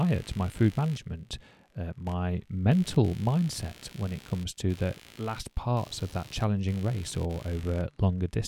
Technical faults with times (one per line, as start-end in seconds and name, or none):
0.00-8.47 computer activity noise